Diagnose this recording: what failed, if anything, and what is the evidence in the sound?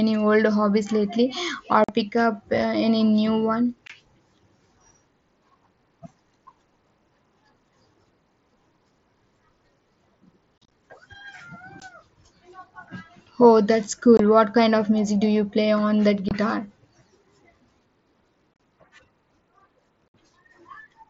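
The Bluetooth link between headset and phone dropped voice packets, and nothing concealed them: unconcealed Bluetooth headset packet loss. Each loss leaves a hard-edged hole. One falls at 1.84–1.89 s, between "old hobbies lately or" and "pick up". Others are at 3.87–3.90 s, 11.80 s, 14.17–14.20 s, 16.29–16.31 s (after "you play on that") and 20.09–20.14 s. At 10.58–10.72 s and 18.54–18.60 s several losses cluster into a chopped crackle. Gap lengths in steps of 7.5 ms fit mSBC frames, whose wideband audio passes through with only light codec damage.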